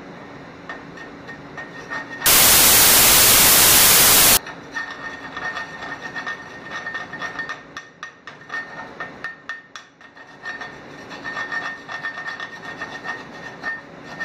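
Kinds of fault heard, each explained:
Samples built from the wrong bytes: from about 2.26 s to 4.37 s the audio turns into loud, harsh broadband noise, because the reader is stitching each sample together from the wrong bytes, whether it's off by one, has the byte order swapped or assumes the wrong alignment. That pushes the jittery low-order bits up into the most significant part of every value, so the original sound is swamped.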